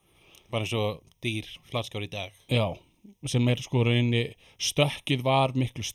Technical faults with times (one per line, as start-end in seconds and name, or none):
0.00-5.94 channel delay (comb filtering)